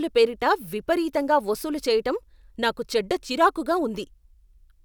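Listening to the speech recording, nothing stood out as a technical problem at any point.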